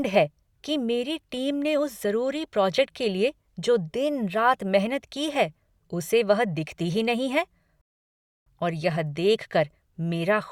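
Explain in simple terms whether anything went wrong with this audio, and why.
Something did go wrong: a rebuffering stall at 7.81 s. Right after "दिखती ही नहीं है" the speech drops to silence for 0.65 s because playback ran out of downloaded audio, then continues from the same point with "और यह" at 8.46 s. Nothing is skipped; the pause only adds time.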